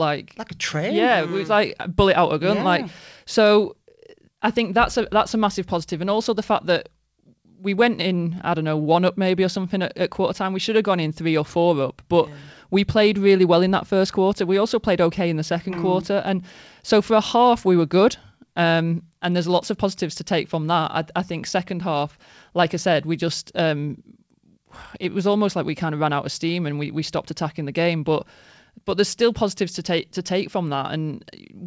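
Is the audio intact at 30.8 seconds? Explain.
Yes, the audio is intact at 30.8 seconds, with no dropout, glitch or other fault there.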